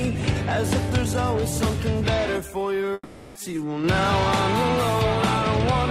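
From 0.65 s to 4.39 s the sound takes on a rough, metallic edge typical of periodic clock jitter. The converter's sampling clock is being modulated at a single rate, around 1.5 kHz, so every component in the audio picks up sidebands spaced that far above and below it. Higher-frequency content is smeared most, which gives the grainy overlay. Because the sidebands only exist where there is signal, the edge disappears whenever the sound drops away.

Inside that span, at 2.93 s, the audio gives way to a smeared, fading continuation of what was just heard. This lasts about 420 ms before roughly 20 ms of silence, and at 3.37 s the sound resumes further along, with about 420 ms of material gone. The likely cause is a long network dropout: the packets never arrived, the receiver concealed the gap by extending the last audio, and playback picked up again past the lost section.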